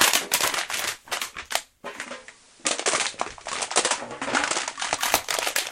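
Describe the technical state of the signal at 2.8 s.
At 2.8 s the receiver is in a digital radio blend to analogue FM (1.94–5.04 s). After a 116 ms cross-fade, the sound is about 4 dB lower, with hiss roughly 25 dB down.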